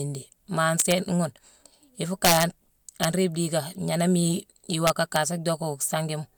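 Integer overflow cracks the speech at 0.80 to 0.92 s, 2.25 to 2.43 s, 3.04 s and 4.87 to 5.16 s. Peaks pushed about 5, 4, 3 and 1 dB past full scale wrap to the opposite sign instead of limiting, so each lands as a harsh snap, far nastier than clipping.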